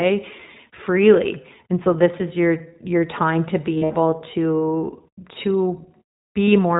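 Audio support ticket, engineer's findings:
iLBC codec, whole clip: speech band-limited, slightly rough and synthetic. Spectrogram shows a hard ceiling at 4 kHz with nothing above. The sound fits iLBC's 15.2 kbps, 20 ms frame mode.

Lost iLBC frames, 3.74–3.92 s, after "your your time to", before "to to": about 120 ms concealed across 160 ms, longest run about 70 ms. The decoder repeats the last pitch cycle mixed with noise, heard as a held buzzy vowel. On the waveform it looks like near-identical periodic cycles that decay. Second loss at 6.47 s, a single 20 ms blip. Recovery is immediate after both because iLBC frames decode independently.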